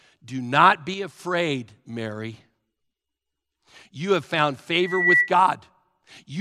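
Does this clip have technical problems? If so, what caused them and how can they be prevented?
Yes. From 0.94 to 1.20 s the speech and background noise drop together by about 5 dB, a sudden gain jump likely from a gain change applied without a ramp. Smoothing gain changes over a few milliseconds prevents it.

From 4.79 to 5.32 s a 2 kHz tone swells over about a third of a second into a loudspeaker feedback squeal, ending around 5 dB above the speech, as the microphone re-amplifies its own loudspeaker. Lowering monitor gain, moving the microphone away from the speaker, or notching 2 kHz prevents it.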